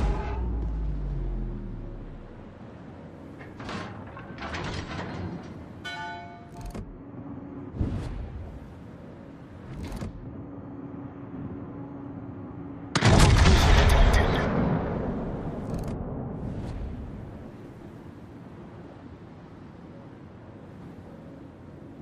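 No faults are audible anywhere in the recording, with nothing in the signal path calling for attention.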